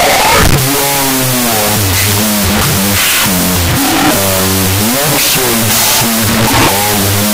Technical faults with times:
0.00-7.33 wrong sample width

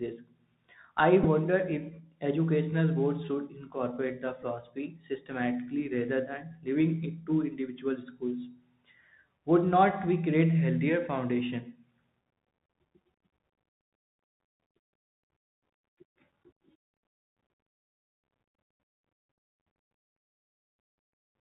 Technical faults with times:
0.00-21.40 Bluetooth CVSD headset codec
1.23-1.25 Bluetooth headset packet repeated
4.42 Bluetooth headset packet repeated

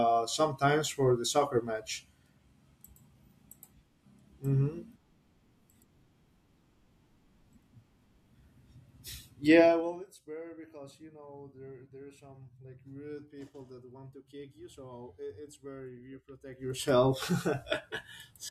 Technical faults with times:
9.60-10.04 zipper noise
16.46-16.88 zipper noise

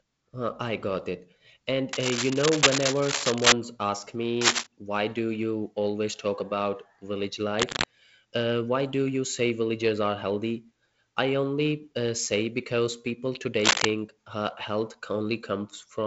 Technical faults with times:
1.93-3.52 cable scratch noise
4.41-4.67 cable scratch noise
7.59-7.84 cable scratch noise
13.60-13.86 cable scratch noise

